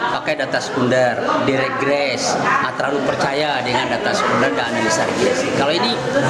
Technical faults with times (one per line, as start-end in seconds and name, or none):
0.00-6.30 gain pumping